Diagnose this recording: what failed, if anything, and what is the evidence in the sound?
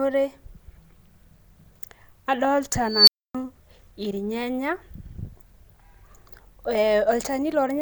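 Unstable filter in the call-processing stage, 2.89 to 3.35 s: a tone around 5 kHz swells over 0.19 s until it clips, then the audio cuts out for 0.27 s. A recursive filter with bad coefficients kept amplifying its own output, overflowed, and reset.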